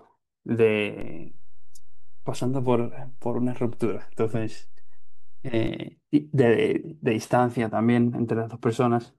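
A DC step at 1.01 s shifts the zero line by about -28 dBFS with a low thump, and another thump marks its return at 5.68 s. Unlike a dropout, the speech continues unbroken.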